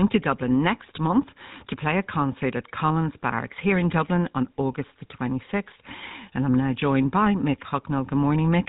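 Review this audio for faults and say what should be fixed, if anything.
Throughout, the speech sounds buzzy and gravelly, with nothing above about 3.8 kHz, the signature of the GSM full-rate codec at what sounds like its 13 kbps rate. It rebuilds each voice from a vocal-tract model driven by a coarse, sparsely sampled pulse train, so the fine texture is lost and a rough buzz replaces it. To prevent it, capture or route the audio over a wideband path rather than a GSM voice channel.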